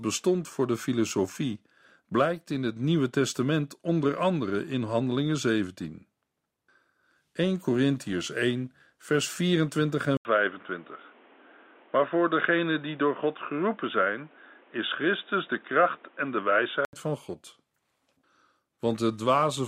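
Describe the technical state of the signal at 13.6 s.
At 13.6 s the recording is running on what is likely a poorer input device, switched in from 10.17 to 16.93 s. The replacement path passes nothing above 3.8 kHz, so the speech turns dull and boxy, with a new background noise roughly 30 dB below the signal. Loudness stays about the same, and an 80 ms silence marks the changeover before the fuller sound returns at 16.93 s.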